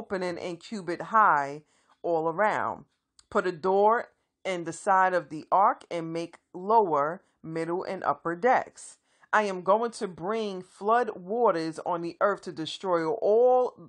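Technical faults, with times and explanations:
Nothing stood out on listening to this speech recording.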